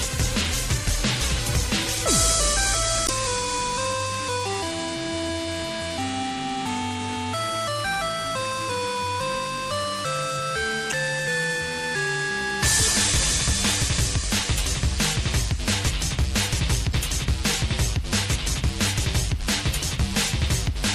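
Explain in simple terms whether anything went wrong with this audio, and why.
Two things went wrong. The first runs through the whole clip. The sound has a watery, swirly quality, and sharp sounds lose their edges. That points to MP3 compression as the likely cause. MP3 saves space by throwing away detail it judges unimportant. When too little data is allowed, quiet details flicker in and out from moment to moment, and the highest frequencies get cut off. Here the damage is plainly audible.

The second problem is damaged data in a compressed stream. It happens three times: from 3.05 to 3.10 seconds, from 10.89 to 10.94 seconds, and from 16.90 to 16.94 seconds. Each is a brief glitch, under a tenth of a second. At those points part of the stored file was corrupted. The player could not read that stretch properly. It lost its place and had to hunt for the next readable chunk before the sound carried on.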